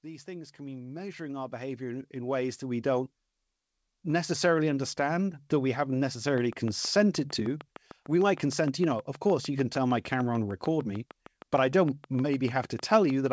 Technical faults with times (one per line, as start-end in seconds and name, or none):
0.05-3.11 automatic gain rising